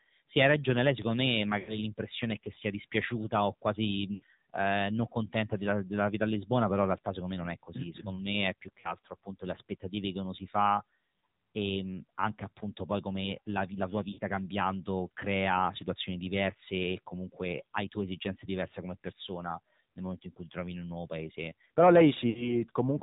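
From start to finish the speech carries the AMR narrowband mobile codec at a low rate of 7.4 kbps. Everything is squeezed into a band that stops at 4 kHz, so a spectrogram shows a hard ceiling with nothing above it. With so few bits for the pulses that drive the vocal-tract model, the voice sounds plainly buzzy and synthetic, and harmonics look smeared rather than crisp.

On top of that come lost AMR speech frames, where corrupted frames were replaced by the decoder repeating the last good pitch and spectral settings at falling gain. The first is at 1.60 to 1.79 s, between "ragione lei secondo me" and "l'impressione è che sia", with about 80 ms concealed, which points to a run of four frames. Another drop at 4.14 to 4.23 s also has about 80 ms concealed. Between "secondo me è più" and "appunto le aspettative che" at 8.80 to 8.93 s, about 40 ms is concealed. After "come la la tua", at 14.12 to 14.19 s before "cambiando crea situazioni diverse", about 60 ms is concealed. 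The last is at 22.30 to 22.62 s, with about 60 ms concealed. Each sounds like a brief drawn-out warble or dip. On a spectrogram it shows as smeared, frozen harmonic stripes that fade, and the waveform envelope sags before the voice resumes rough.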